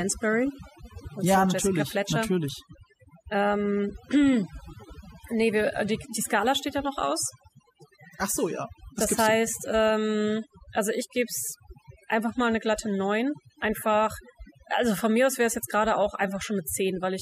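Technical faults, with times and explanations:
Throughout, overdone noise removal: aggressive suppression cuts frequency bands near the noise floor, leaving near-silent gaps with twinkling specks and taking quiet parts of the voice with them.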